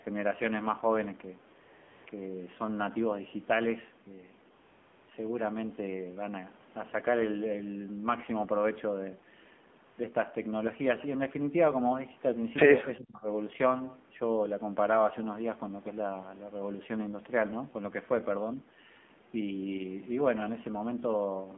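Speech carried through the AMR narrowband mobile codec: nothing above about 3.5 kHz, buzzy and synthetic timbre fitting a 7.4 kbps mode, and a spectrogram cut flat at the top. AMR comfort noise replaces the real background at 1.62–2.06 s, 2.10 s, 4.56–5.08 s and 9.86–9.98 s, where the sender stopped transmitting speech frames. These gaps show as smooth, uniform noise patches with abrupt edges.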